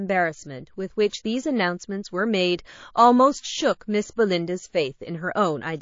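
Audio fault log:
throughout, MP3 compression: watery, swirly sound with dull treble, likely from a low-bitrate encode near 32 kbps; the spectrogram shows a flat top cut and flickering holes.
1.10 to 1.13 s, pre-echo: hiss about 15 dB up smears 27 ms ahead of an attack, which fits a long transform block; the waveform shows fuzz before the onset.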